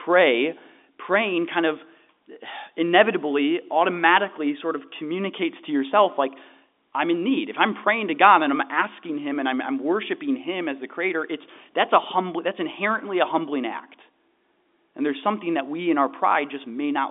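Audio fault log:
Nothing to log here: the speech just sits in a normal telephone band of about 250 Hz to 3.6 kHz, which fits ordinary G.711 mu-law coding at 64 kbps.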